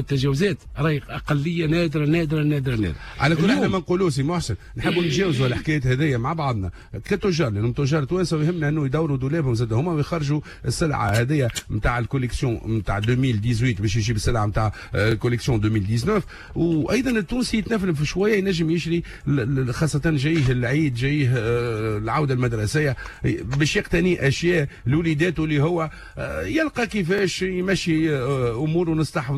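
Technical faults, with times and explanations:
3.05–3.07, 7.07–7.09, 11.09–11.11, 15.11–15.14, 19.14–19.16, 23.16–23.18, 27.18–27.21 s: overlapping chunks. A 23 ms slice replays at each 4 s join, causing a stutter-click. A waveform shows a duplicated segment, and a spectrogram shows a thin vertical seam.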